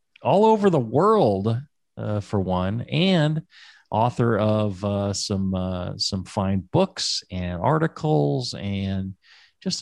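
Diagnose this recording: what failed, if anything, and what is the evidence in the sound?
Nothing in this speech recording points to a failure at any stage of the capture, processing, transmission or playback chain.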